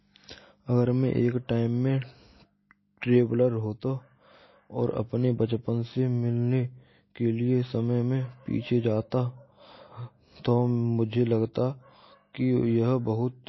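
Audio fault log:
throughout MP3 compression: watery, swirly speech with nothing above 5.8 kHz, likely an encoder short of bits, fitting about 24 kbps, cutting treble and flickering weak frequency lines.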